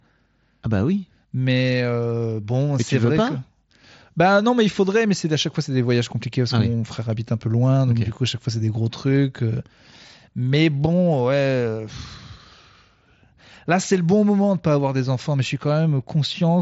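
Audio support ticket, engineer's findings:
No faults found in the speech path. Bluetooth mSBC headset codec working as designed: band stops near 7.7 kHz, with the light grain on louder passages expected from its fixed bit pool.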